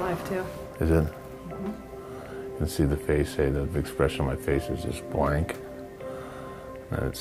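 No technical faults can be heard anywhere in this audio. Close listening turns up nothing that needs a timestamp.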